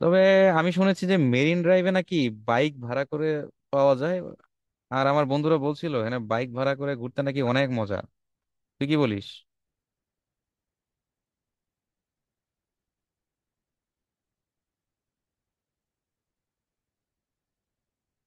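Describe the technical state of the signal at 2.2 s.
At 2.22 s a single corrupt frame decoded: flipped bits misplace energy, giving a brief chirp, squeak, blip or burst of noise peaking around -30 dBFS, unlike a dropout's silence.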